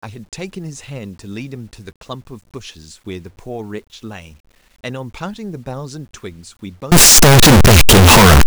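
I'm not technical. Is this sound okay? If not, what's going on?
No. From 6.92 s to the end, the speech turns into very loud, harsh distortion, and even the quiet moments blast as loud as the rest. The likely cause is signed and unsigned mixed up: the 8-bit samples are being read the wrong way round.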